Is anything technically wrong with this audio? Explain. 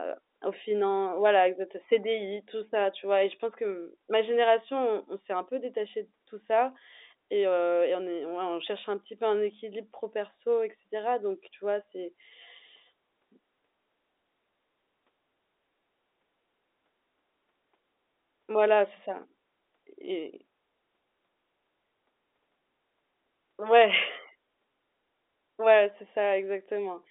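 No, nothing here is technically wrong.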